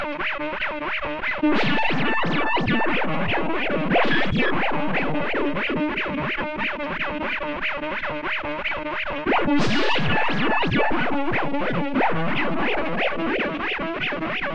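Nothing here stands out as a technical fault at any point.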